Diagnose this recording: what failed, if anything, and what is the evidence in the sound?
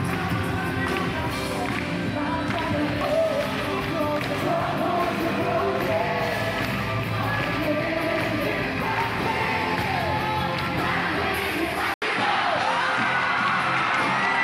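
At 11.94 s an 80 ms gap, then nothing above 11.4 kHz and a new noise floor about 45 dB down: likely an input switched to a poorer device, unlike a codec bandwidth drop.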